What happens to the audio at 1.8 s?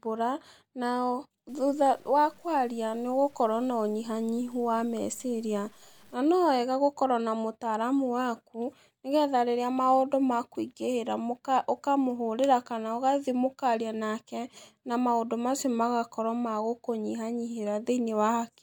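At 1.8 s the speech is inside a stretch of low bit depth without dither, from 1.49 to 6.14 s. It sounds gritty, with distortion that tracks the voice about 35 dB down, likely from truncation to 8 bits. The waveform shows visible steps, and the spectrogram shows broadband hash that follows the speech.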